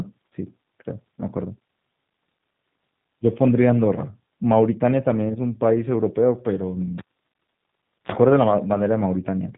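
G.729 codec damage runs through the whole speech clip. The codec rebuilds each 10 ms frame from a vocal tract filter, a pitch estimate and a few sparse pulses rather than sending the waveform itself. That leaves the speech intelligible but audibly rough and synthetic, with a buzzy, slightly metallic edge. Nothing above 3.8 kHz survives, so sibilants sound dull and clipped. The plainly audible coarseness fits the 8 kbit/s G.729A variant.

A cable pulled and plugged in interrupts the sound from 6.98 s to 8.12 s. Pulling the live lead breaks the circuit with a pop, and then the signal drops to near silence for about 1.08 s. As the plug goes back in, the tip touches before the connection seats, and the unshielded contact picks up a short burst of 60 Hz mains buzz lasting about 45 ms. A second pop follows as the sound returns.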